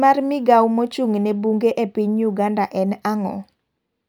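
Nothing in this bit of speech stands out as a technical fault, so there's nothing here to flag.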